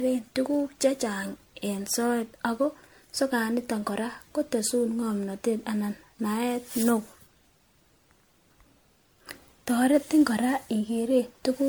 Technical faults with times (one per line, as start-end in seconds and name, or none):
0.00-11.68 generation loss